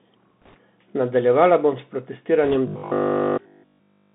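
Throughout, the speech sounds thin and narrowband, with scratchy s sounds and a granular hiss. This is the Bluetooth CVSD headset codec, passing only about 150 Hz to 3.6 kHz, which fits a 64 kbps link.

From 0.42 to 0.55 s, and more faintly from 2.44 to 2.56 s, a rushing crackle rides over the speech without sharp clicks. These are bit errors on a Bluetooth voice link, with a roughly 3 percent error rate in the first burst and about half that in the second.

From 2.68 s to the end at 4.14 s, the speech turns into a rigid, metallic 50 Hz buzz that loosely follows the speech. This is robotic sound from repeated short buffers, likely caused by replaying a 20 ms block in place of nearly all the real audio.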